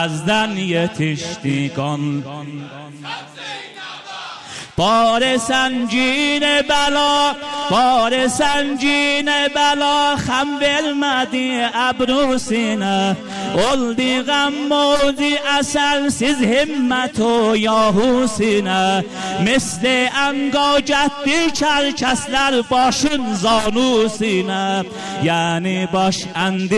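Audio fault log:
No faults are audible; the signal stays continuous, with no interruptions or disturbances anywhere in the recording.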